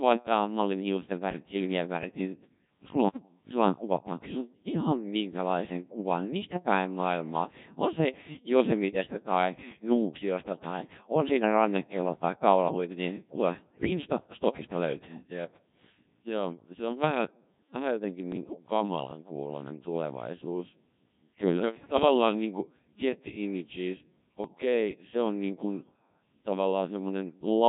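The whole recording went through the Codec 2 vocoder, which sends only pitch, voicing, energy and a spectral envelope and rebuilds speech from sine waves. Its heavily damaged, robotic, buzzy character fits the 1.3 kbit/s mode, and the original waveform is gone throughout.

Bit errors on digital voice radio corrupt the vocoder's frame parameters twice. From 13.69 to 13.90 s, a dense burst of errors (around one bit in ten) makes the synthetic speech jump in pitch, level and tone, collapsing into bleeps and warbling gibberish. From 18.32 to 18.70 s, a lighter error rate over a longer stretch produces similar robotic garble.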